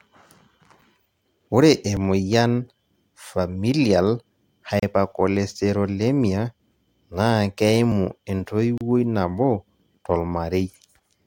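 Separately encoded pieces were joined without trimming encoder delay and padding, leaving a gap at a join of encoded pieces: 32 ms silences at 4.80 and 8.78 s, smeared, about every 4 s.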